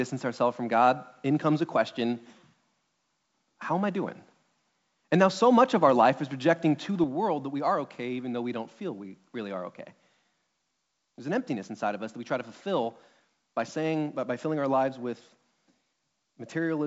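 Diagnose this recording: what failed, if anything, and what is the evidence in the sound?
At 7.04 s, speech and background noise drop together by about 5 dB and stay down: a sudden gain jump, likely an unramped digital gain step.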